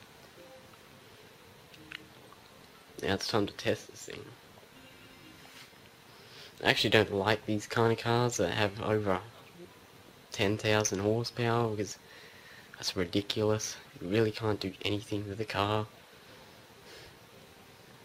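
Nothing in the audio stood out as a technical problem on listening.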